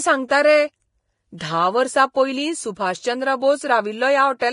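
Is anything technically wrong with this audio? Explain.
Yes, there are two problems. Throughout the speech there's heavy Vorbis compression damage, likely from a low-bitrate encode, roughly 29 kbps judging by the sound. Nothing comes through above 10.5 kHz, and the coarsely quantised treble turns fine detail into hiss, so the whole clip sounds grainy and roughened.

From 1.38 to 1.41 s there's pre-echo. A sharp attack lands late in a transform block, and the quantisation noise spread across that block fills the quiet 31 ms just before it. You hear a short hiss ahead of the onset, and the attack itself sounds smeared.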